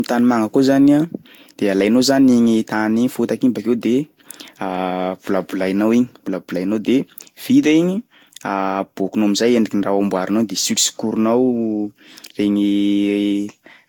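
Throughout the speech, the sound is swirly, smeared and hollow. Consonant attacks blur, and nothing remains above 19.3 kHz. This is likely generation loss. It points to about four Vorbis passes near 72 to 77 kbit/s, each adding fresh quantisation damage.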